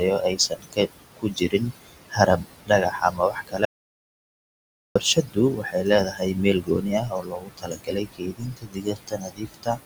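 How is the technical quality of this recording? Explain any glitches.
The recording has three clear problems, all tied to processing or a lost input.

Noise suppressor artifacts run through the whole clip. The suppressor pulls down bands it judges to be steady noise by about 20 dB, frame by frame. The room noise, sitting roughly 12 dB under the speech, drops away between phrases and rises under them.

Speech cut by the noise suppressor shows up from 0.0 to 9.79 s, touching roughly half the clip in total. The same processor mistakes quieter parts of the speech for noise and turns them down by up to about 21 dB, so soft consonants and word endings sound swallowed.

An audio dropout to silence runs from 3.65 to 4.95 s, about 1.3 s long. The sound cuts to silence, with no room tone at all, then returns mid-flow. The cause is likely a lost input, such as a disconnect or a brief mute, with silence written in the meantime.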